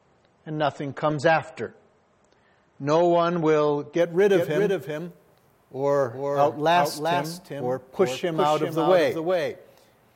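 From 0 to 4.0 s the audio comes from an adaptive stream starting at a low bitrate. Nothing sounds above 8.4 kHz and compression artefacts are strong, which fits roughly a 32 kbit/s MP3. At 4.0 s it jumps to a 128 kbit/s MP3 with no gap. On a spectrogram the flat ceiling suddenly lifts.

From 4.33 s to the end a doubled audio track appears. A full-band copy trails by about 0.4 s at roughly 5 dB lower, with no reverb tail. It is likely a second, slower capture path. The waveform shows every event repeated, and the copy starts abruptly.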